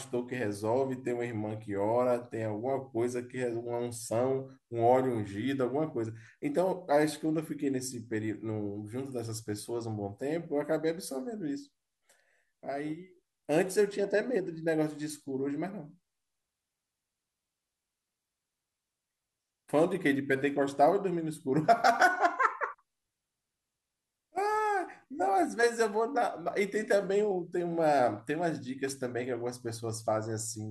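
A speech recording with no technical fault audible anywhere in it. Nothing in the audio calls for a time, a cause or a repair.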